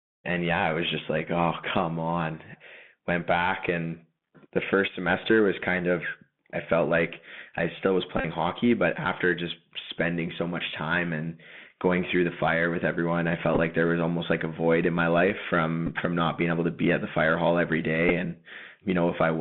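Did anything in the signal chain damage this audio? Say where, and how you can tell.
Yes. The codec stage shows the Bluetooth CVSD headset codec throughout. Audio is confined to roughly 150 Hz to 3.5 kHz, sibilants turn scratchy, and a granular hiss sits under the speech. The one-bit delta modulator's adaptive step can't track fast high-frequency swings, which fits a 64 kbit/s CVSD link.

The wireless link also shows Bluetooth headset packet repeats, where lost packets are replaced by replaying the previous one. From 8.18 to 8.25 s, after "like I still was", a run of around 40 ms produces a brief buzz near 267 Hz. Shorter disturbances follow at 13.54–13.60 s, at 15.87 s after "void in my life", and at 18.09 s after "the fire hall every".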